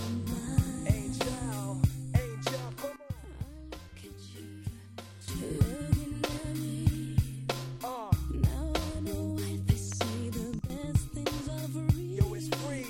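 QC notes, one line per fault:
2.96–5.28 s and 10.59–10.70 s, sudden gain jump: sound and noise floor drop together, about 12 dB then about 10 dB, likely from unramped gain steps.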